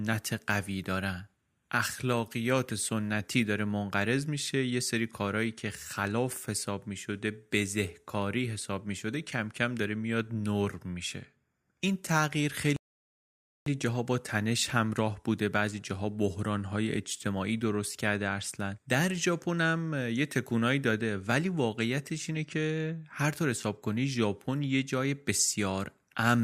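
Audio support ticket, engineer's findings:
Rebuffering stall, 12.76–13.66 s: player buffer ran dry, playback halted pending more downloaded data. Speech drops to silence for 0.9 s, then resumes exactly where it stopped. No audio lost; 0.9 s added to the timeline.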